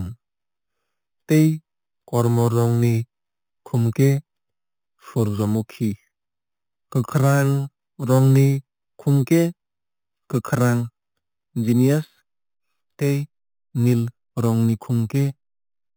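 Throughout the speech, the audio shows imaging from sample-and-hold upsampling. The rate was raised by holding each sample for several output samples with no anti-imaging filter, which fits an 8 kHz source brought up to 48 kHz. Mirrored copies of the speech spectrum therefore land above the original band, the lowest spanning 4 kHz to 8 kHz at about 23 dB below the signal. It is heard as a bright, metallic fizz that rises and falls with the speech.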